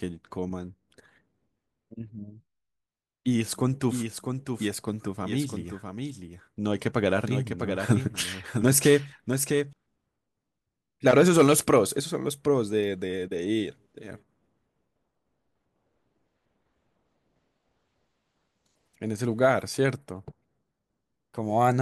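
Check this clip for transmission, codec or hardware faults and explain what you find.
There's one fault: a doubled audio track from 3.91 to 9.73 s. The speech gets a flat, full-band echo trailing about 0.7 s behind at roughly 5 dB lower, with no room tail, and it switches on and off abruptly. A second, slower capture path is the likely cause.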